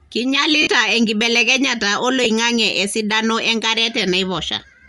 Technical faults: Bluetooth LC3 compression; lost LE Audio frames

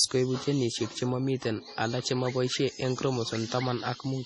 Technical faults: MP3 compression

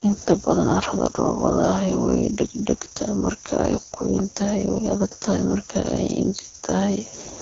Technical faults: AMR wideband (HD Voice) codec

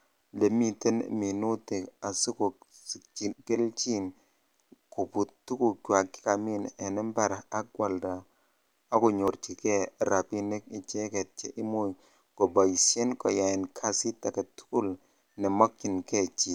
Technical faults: audio missing between chunks

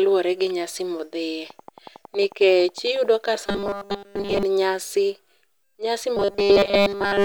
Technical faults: train of clicks; robotic sound from repeated short buffers

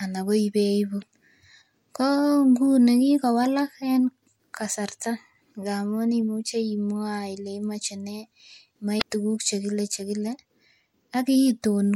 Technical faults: damaged data in a compressed stream

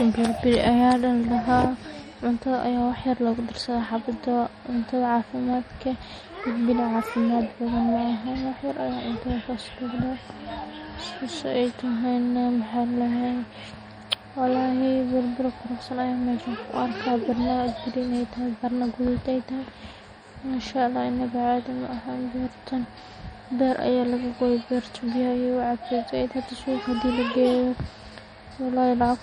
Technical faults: MP3 compression

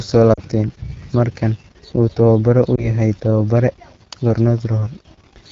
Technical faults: AMR wideband (HD Voice) codec; lost AMR speech frames

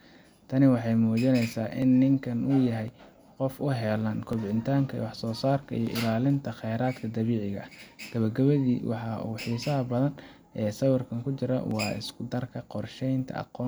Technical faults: dropped samples

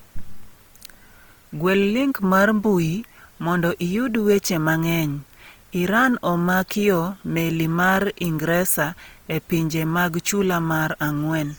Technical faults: Opus compression

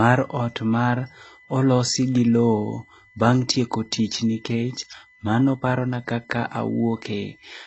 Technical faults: USB whine; transcoding between lossy codecs

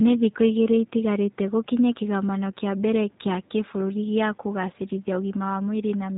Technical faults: G.729 codec

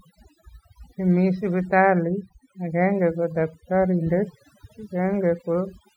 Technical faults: overdone noise removal

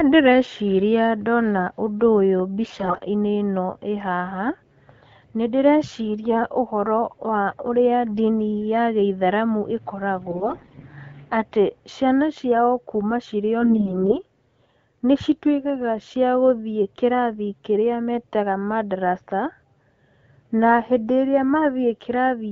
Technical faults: AMR bit errors

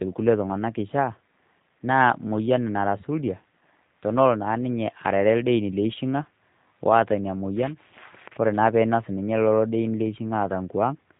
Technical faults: G.729 codec

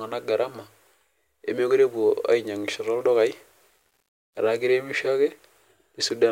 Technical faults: low bit depth without dither

